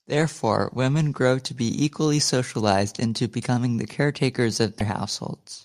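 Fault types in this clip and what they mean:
broken MP3 bit reservoir: after "into becoming the caretakers", at 4.79 s, the speech jumps ahead through a 24 ms glitch, one frame long. Likely a cut MP3 stream whose next frame borrowed missing reservoir bytes.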